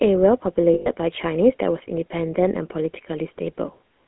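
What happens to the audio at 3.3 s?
At 3.3 s the speech carries the same GSM full-rate codec damage heard across the whole clip: a buzzy, gravelly roughness from pulse-driven vocal-tract coding, which fits a 13 kbps stream. A spectrogram shows energy confined to 200 Hz–3.4 kHz, with coarse, smeared harmonics.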